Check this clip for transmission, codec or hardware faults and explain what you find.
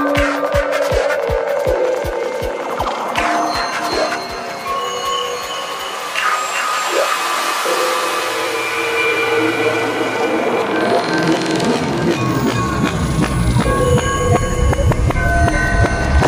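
Nothing in the clip points to a transmission, codec or hardware fault.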